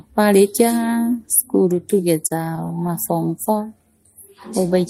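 From 2.27 to 2.90 s the speech hits a run of repeated stalls, basically a stutter. Packets were turning up late, so the jitter buffer kept running dry, four times in that stretch. Each time the receiver just stretched the last bit of sound to cover, adding 64 ms in total, with the longest hold about 28 ms. That's roughly a tenth of the span being filled in. Nothing actually drops out, but the delivery hitches and drags.

Then from 3.74 to 4.31 s there's a jitter buffer slow-down. The buffer was low on reserve or had just raised its target delay, so the receiver padded it by repeating tiny pitch-period-sized slices of the audio over and over, adding 45 ms. The speech runs at about 94% speed in that stretch, sounding a bit drawn out and sluggish while the pitch stays where it was, since it's repetition and not resampling.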